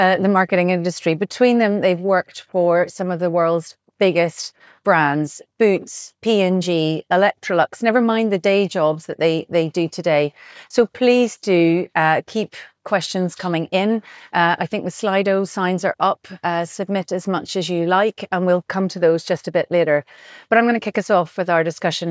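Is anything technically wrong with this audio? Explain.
No, nothing technically wrong can be heard anywhere in this audio.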